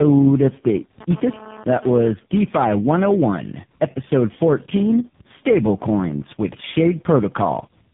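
Throughout the clip, tandem speech coding makes the speech rough, muffled and warbly. The sound suggests about four narrowband speech codecs in a row, each re-encoding the previous one's degraded output. A spectrogram shows nothing above 3.7 kHz and smeared, wavering formant bands.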